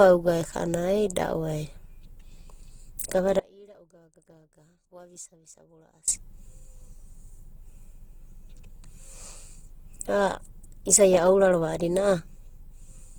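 Opus compression runs through the whole clip, from the start. The speech is plainly damaged: its bands keep their energy, but where detail is missing they are refilled by folded copies of lower bands or by noise. Tones come out rough and grainy rather than swirling, and the bandwidth still reaches up to 20.1 kHz. This fits Opus in its music (CELT) mode at a low rate around 16 kbps, likely the cause.

An audio dropout to a faint residue follows from 3.39 to 6.08 s, about 2.7 s long. The speech cuts out abruptly and comes back just as abruptly. Between those points only a faint sound remains, about 30 dB below the normal level. This is likely the wanted signal lost while the path after the break stayed live.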